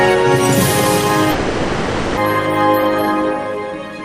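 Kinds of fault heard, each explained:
Long network dropout: from 1.31 to 2.19 s the sound turns into a smeared, buzzy fill, likely lost packets, and about 0.86 s never returns.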